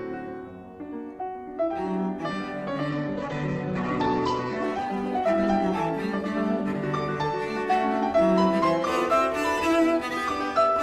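From 2.91 s to 9.25 s there is a call bitrate drop. The encoder starves from what sounds like roughly 128 kbps to about 10 kbps, bottoming out for 1.5 s. Coarse coding turns the sound rough and watery, and the top end narrows from 20 kHz to 8 kHz, sounding muffled.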